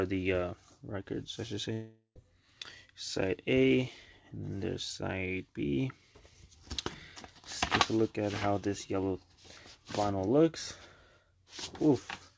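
From 1.73 to 2.18 s a fading buzz, then brief silence, replaces 420 ms of sound. This is likely a long network dropout, not a short glitch.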